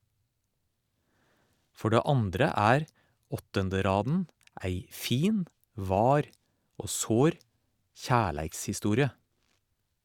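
Speech recording with no technical faults to report.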